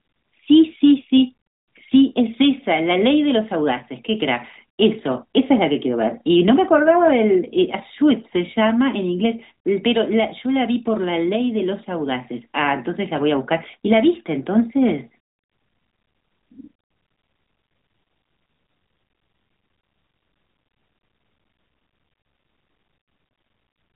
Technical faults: none

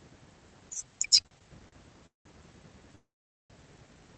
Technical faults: repeated stalls (stutter); call audio freeze

